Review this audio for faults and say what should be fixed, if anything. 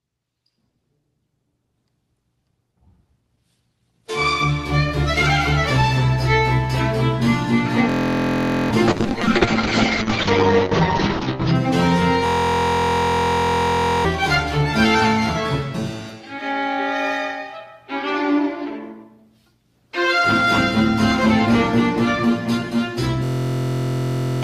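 There's a system hang loop at 7.90–8.71 s, 12.26–14.05 s and 23.24–24.43 s. The same 23.2 ms slice repeats as a steady 43 Hz buzz, which fits a 1024-sample buffer looping while the driver froze. Around a second or two of audio vanishes. Fix it by finding what's stalling the audio thread.

A call bitrate drop runs from 8.89 to 11.61 s. The Opus encoder falls from 32 to 7 kbps, so the sound gets rough and watery, and the top end is cut to 8 kHz for about 2.6 s. Tune the bandwidth estimator so it doesn't slash the rate this hard.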